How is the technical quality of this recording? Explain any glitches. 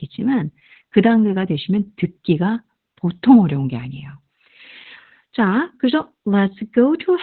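Technical quality is poor. The whole clip carries heavy Opus voice compression. The speech is muffled and slightly hoarse, with a faint robotic edge. Nothing is heard above about 4.3 kHz, so sibilants and breath detail are gone. This is narrowband coding. The encoder has cut the band to telephone width and used its linear-prediction speech mode, SILK. It codes the excitation coarsely to save bits. The depth of damage fits a bitrate near 8 kbps.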